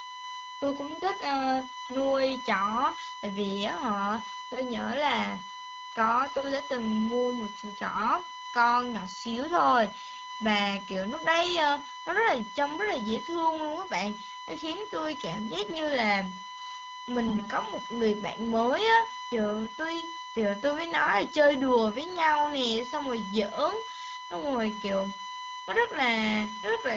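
From the start and through the whole recording, a steady USB whine sits at 1 kHz, only about 10 dB below the speech. Current drawn in the bus's 1 ms frames is leaking into the audio through the power or ground, giving a fixed tone.

AMR bit errors break through at 1.86 to 1.95 s, 6.32 to 6.40 s, 7.94 to 8.09 s, 15.62 to 15.80 s and 17.27 to 17.49 s. Flipped low-priority bits misplace the excitation pulses and skew the fine parameters, so the speech briefly turns hoarse and gargly.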